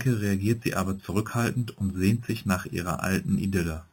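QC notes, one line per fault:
Throughout: imaging from sample-and-hold upsampling. A metallic fizz follows the speech. Mirrored copies fill 4 to 8 kHz, about 18 dB down. This fits unsmoothed 8 kHz audio raised to 44.1 kHz.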